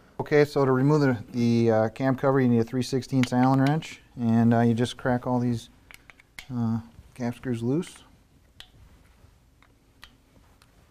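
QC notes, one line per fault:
0.30–10.68 s, clock drift buffer slips: a click every 0.65 s or so, likely two mismatched clocks, roughly 300 ppm apart, dropping or repeating a few samples each time.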